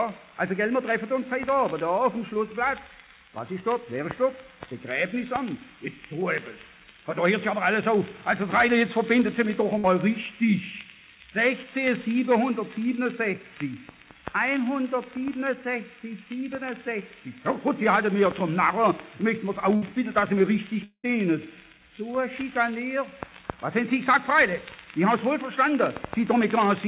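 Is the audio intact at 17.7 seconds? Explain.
Yes, the audio is intact at 17.7 seconds, with only the narrow telephone-band sound of the call path, which carries nothing above 4 kHz.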